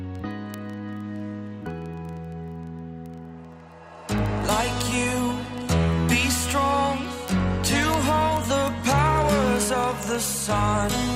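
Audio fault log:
0.12–11.15 s, word clock ticks: sharp ticks of uneven strength at a steady rate of about one every 40 ms, several hundred in total. The receiver runs on its own clock, unlocked from the sender's, and the mismatch, around 500 ppm, makes the two slip past each other repeatedly. At each slip one sample is dropped or repeated and a few are misread. A spectrogram shows evenly spaced thin vertical broadband lines, and the waveform shows tiny one-sample steps or spikes at the same spacing.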